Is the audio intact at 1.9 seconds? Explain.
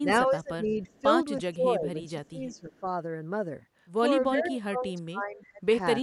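No. From 1.51 to 2.83 s the speech dips in level, at its deepest by around 15 dB, across about a second in total. This is speech suppressed in double talk, likely from an echo canceller mistaking the talker for loudspeaker echo and turning both down.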